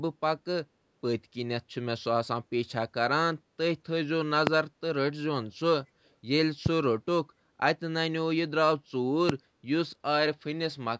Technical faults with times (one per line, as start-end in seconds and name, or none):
4.47-4.50 loud pop
6.05-6.13 echo leak
9.29-9.32 loud pop